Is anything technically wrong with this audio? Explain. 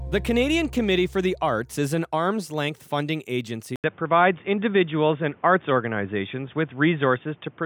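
Yes. After "arm's length funding agency", at 3.76 s, an 80 ms gap occurs, likely an input switched to a poorer device. The sound then turns dull above 3.6 kHz, shifts in level, and gains faint new noise.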